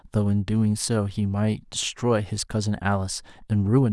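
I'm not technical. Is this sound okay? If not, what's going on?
Yes, nothing in this recording sounds wrong.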